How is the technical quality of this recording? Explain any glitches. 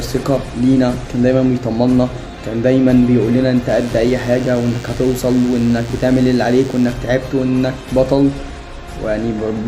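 The recording has one glitch: DECT cordless phone buzz from 3.69 to 6.93 s. A nearby DECT handset or base transmits a radio burst every 10 ms, and the audio circuitry rectifies it, producing a thin, steady 100 Hz buzz rich in harmonics, roughly 25 dB below the main sound.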